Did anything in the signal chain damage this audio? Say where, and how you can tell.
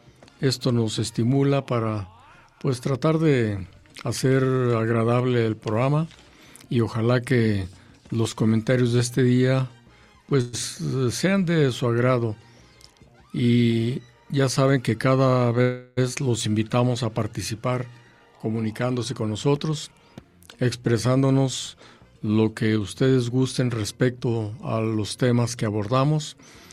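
Yes, both at the network and jitter-buffer stage. There's a call audio freeze at 10.41 s and again at 15.62 to 15.99 s: the last sound smears into a fading buzz or hiss for 116 ms and then 352 ms, then picks up exactly where it stopped. That's likely late packets draining the buffer.

Then there's a jitter buffer speed-up at 13.72 to 15.07 s (109%), 17.84 to 19.87 s (111%) and 23.29 to 24.62 s (111%). The audio rushes at unchanged pitch because the buffer drops tiny pitch-period slices to shed the backlog, roughly 150 to 200 ms per stretch.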